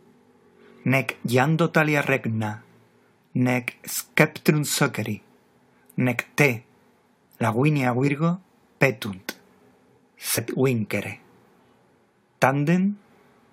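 At 2.08 s, 8.07 to 8.09 s and 10.37 s, compressed frames are skipped. Each time the audio jumps ahead, by about 50, 20 and 50 ms. That points to whole 23.2 ms frames going missing.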